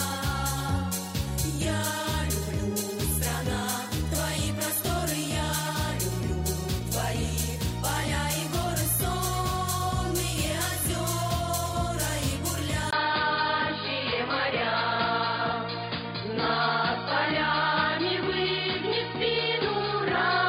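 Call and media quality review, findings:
12.91 s onward: dull after 20 ms gap; likely input switched to a poorer device. Spectrogram: hard ceiling at 4.9 kHz; waveform: brief dropout, level unchanged.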